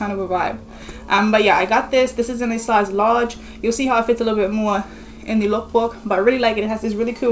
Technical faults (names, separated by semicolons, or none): none